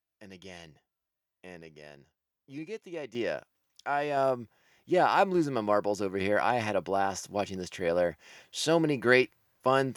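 A microphone volume step-up occurs at 3.15 s, where the level of the speech and the room behind it rises abruptly by about 9 dB in a single jump. The capture side evidently judged the input too quiet and raised the device's input volume all at once rather than ramping it. Because the change happens before any processing can separate talker from surroundings, voice and background noise both become louder together, with no fade.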